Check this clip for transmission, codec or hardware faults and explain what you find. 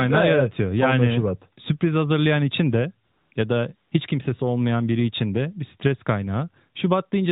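One fault type is present: AMR comfort noise, heard three times in the speech.

The first runs from 3.06 to 3.32 s, after "sürpriz hazırlayan için de". A brief one follows at 3.34 to 3.36 s, and another at 3.76 to 3.92 s, before "hiç kimsesi olmayan biri". The transmitter flagged these gaps as silence and stopped sending speech frames for 260, 20 and 160 ms. The receiver substituted smooth synthetic noise, so the real background switches abruptly to a steady hiss and back. The narrowband AMR path itself carries light coding damage, consistent with the 12.2 kbps mode.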